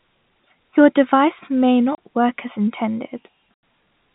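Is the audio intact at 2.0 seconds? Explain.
No, not quite: packet loss filled with silence cuts a gap from 1.95 to 1.98 s, ending just before 2.0 s. The 30 ms hole, which fits one lost packet, has hard edges.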